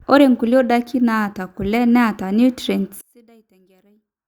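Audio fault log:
3.01–4.27 s, one channel inverted: the speech drops by about 33 dB and turns faint through to the end. The likely cause is one stereo channel flipped in polarity, so the centred voice cancels on mono summing and only the small inter-channel difference survives.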